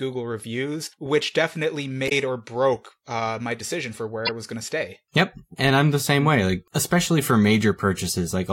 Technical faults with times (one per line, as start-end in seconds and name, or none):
2.05-2.12 damaged data in a compressed stream
4.25-4.29 damaged data in a compressed stream